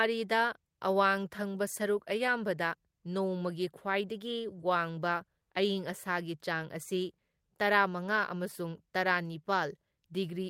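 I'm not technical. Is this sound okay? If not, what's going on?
Yes, nothing stood out as a problem when listening to this recording.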